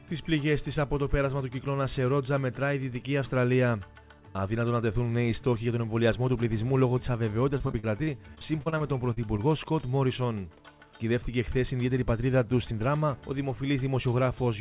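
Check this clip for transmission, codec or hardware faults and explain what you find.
One transmission fault stands out: repeated packet loss (robotic sound) from 7.58 to 9.40 s. Twelve short holes, the longest 40 ms, together remove about 300 ms, and each is patched by stretching the preceding sound. That concealment covers about 16% of the stretch and gives a choppy texture with pieces missing. Unlike a single dropout, the holes keep recurring in quick succession. Throughout, the audio stops at 4 kHz, which fits a narrowband G.711 call path.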